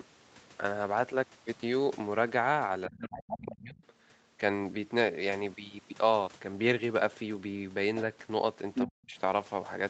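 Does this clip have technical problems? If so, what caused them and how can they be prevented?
Yes. Speech suppressed in double talk occurs from 2.88 to 3.82 s, dipping by roughly 25 dB, and from 8.85 to 9.15 s, where it drops by about 40 dB. The likely cause is the echo canceller failing to separate the talker from loudspeaker echo while both sides spoke, so it pulled everything down. Using a headset or an echo canceller with better double-talk detection would prevent this.

The other side's voice leaking through appears from 3.01 to 3.6 s, about 10 dB below the talker, and from 8.74 to 8.86 s at roughly the same level as the talker. Loudspeaker playback was picked up by the microphone and likely not fully cancelled. A headset, or lower speaker volume with better echo cancellation, would keep it out.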